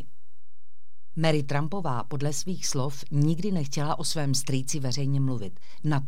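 From the first sample to the last, the speech sits on a DC offset: the entire waveform is displaced from zero by a fixed amount, at about -27 dBFS. The offset itself is inaudible, since it is a constant rather than a vibration, but it eats into headroom on one side of the waveform and appears as steady energy at 0 Hz in the spectrum. A high-pass filter or DC-blocking stage would remove it.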